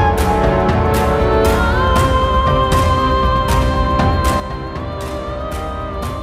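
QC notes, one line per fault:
4.4 s to end, sudden gain jump: the digital gain was likely stepped down by about 10 dB in a single sample with no ramp, so from 4.4 s onward the sound and its background noise drop in level together and stay at that lower level.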